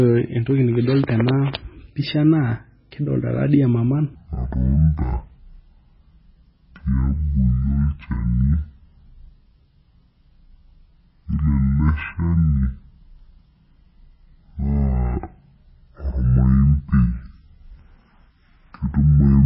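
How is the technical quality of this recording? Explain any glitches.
Technical quality is poor: heavy codec damage runs through the whole recording, and most of it plays back at the wrong speed.

MP3 compression affects the entire clip. Nothing is present above 5.5 kHz, so the top of the spectrum sounds abruptly cut off and the speech comes across dull. This is likely a very low-bitrate MP3 encode, which fits something around 16 kbps. At that rate the encoder discards the treble wholesale and keeps dropping weak frequency components in and out from frame to frame. The result is a watery, swirling texture, metallic chirps on sibilants, and smeared consonant onsets.

A section at the wrong speed starts at 4.15 s and continues to the end. From that point the audio plays at 0.557 times its original speed, so it is slower and roughly ten semitones lower, with speed and pitch dropping together at the transition. 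The speech turns deep, drawn out and sluggish. The likely cause is playback or editing against the wrong clock for that portion, which stretches the timing and lowers the pitch in the same proportion.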